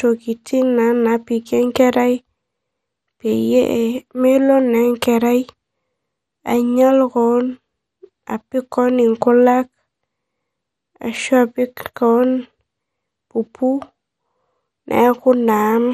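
Speech, carrying MP2 compression artefacts throughout: a dull, gurgling granular texture and flickering upper bands, with nothing above about 15.1 kHz. The cause is likely MPEG Layer II encoding starved of bits, consistent with roughly 64 kbps, so sub-bands switch off and remaining bands quantise coarsely.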